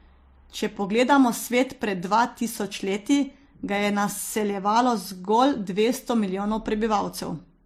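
Speech, with one fault running the whole way through. Nothing is heard above about 16.6 kHz, so the top of the band is cut flat. Two layers of codec damage sit on the sound together. The cause is likely transcoding between lossy codecs. The mix fits an MP3 pass at around 48 kbit/s re-encoded as HE-AAC at a similar rate. The second encoder spent bits on the first one's artefacts, and the lowest cut-off in the chain stayed.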